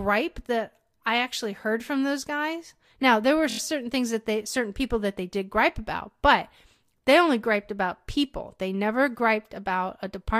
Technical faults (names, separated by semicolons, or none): repeated frames